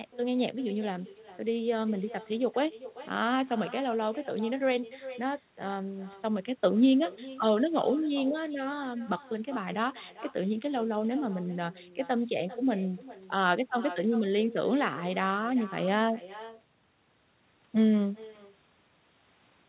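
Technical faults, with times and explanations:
Throughout: echo with no canceller. The far end's loudspeaker feeds its microphone unchecked, so each phrase returns roughly 0.4 s later, thinner and about 17 dB down.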